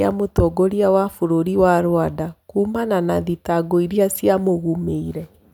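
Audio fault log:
Nothing stood out on listening to the speech in this recording.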